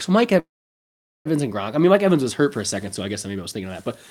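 At 0.39 s the speech stops and the last sound is drawn out into a short fading buzz or hiss, then goes silent for about 0.8 s before resuming at 1.27 s. This is a call audio freeze, likely from packets being held up so the jitter buffer ran dry. About 860 ms of fill was inserted, nothing was lost, and the speech picks up exactly where it left off, now running 860 ms later.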